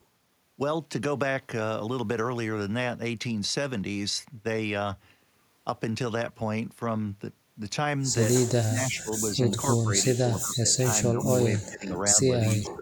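At 3.81 s there's a single low thump where the waveform's zero line suddenly jumps, a DC step. The speech carries on unaffected, and the offset then drains back toward zero, which fits a high-pass around 2 Hz pulling it back.

From 8.64 s onward the voice keeps getting pushed down in bursts: 8.64–9.12, 9.32–9.59, 9.81–10.88, 11.1–12.18 and 12.56 s to the end. The dips range from slight to roughly 30 dB. That's likely speech suppressed in double talk, with an echo canceller ducking the talker while the far side spoke.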